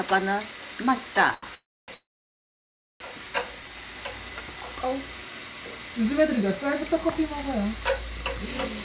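At 1.34 s the sound hangs on one moment for about 84 ms, with a faint buzzy smear, until 1.44 s, when it picks up exactly where it left off. This is a short stall from a late packet: the jitter buffer ran dry, so the receiver stretched the last bit of sound while it waited. Nothing is lost; the rest of the clip simply arrives about 84 ms later.

Two longer breaks follow. From 1.54 s to 1.90 s the sound trails off into a brief fading buzz and then goes silent for about 280 ms. From 1.94 s to 3.02 s the same happens for longer, with roughly a second of silence. When the sound resumes each time, it continues from the point where it stopped. These are call audio freezes, likely caused by packets held up in transit. The receiver bridged each wait with a decaying copy of the last sound and then silence, inserting about 335 ms and then about 1.06 s into the timeline. The band-limited sound, with nothing above 4 kHz, fits the G.711 mu-law call path.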